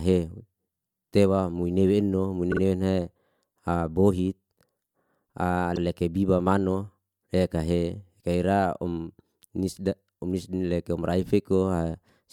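Speech with two bursts of repeated frames. Just after "mui nue eno mui", at 2.51 s, a 48 ms block plays twice more, stretching the audio by 96 ms. At 5.75 s the same-sized block repeats once, adding 48 ms. The 48 ms length fits a pair of compressed frames. Unlike a dropout, nothing goes missing: the same fragment plays back in a stutter.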